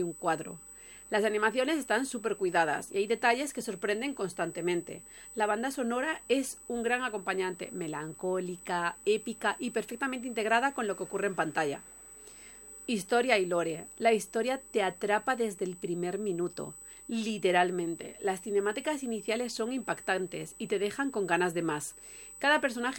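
A USB whine at 8 kHz runs throughout, roughly 20 dB below the signal. It comes from the 125-microsecond microframe rhythm leaking into the supply or ground. Its fixed high pitch separates it from mains hum, which sits at 50 or 60 Hz.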